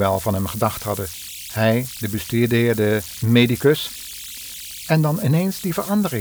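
From start to finish the speech carries converter idle tones, sitting only about 16 dB below the signal. A delta-sigma converter running without dither has slipped into repeating bit patterns on its small input, and those patterns sound as a thin whistle near 3 kHz in the pauses, turning to grainy noise under quiet passages. Unlike broadband hiss or low-pitched mains hum, the residue is a narrow, high, tonal chirp.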